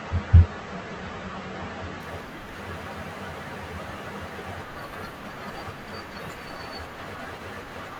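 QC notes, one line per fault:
0.0–2.0 s, adaptive stream starting at a low bitrate: nothing above 8.2 kHz and heavier codec smearing, then a sudden step up in clarity with no gap, unlike a dropout.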